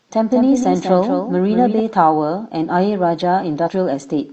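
From the start to 1.8 s, a doubled audio track: a second copy, about 5 dB quieter, trails roughly a fifth of a second behind with no room colour, and stops abruptly. It likely comes from the same audio being captured again through a slower path. From 3.58 to 3.69 s, damaged data in a compressed stream makes the decoder misread corrupted frames and lose sync until it finds a valid frame header.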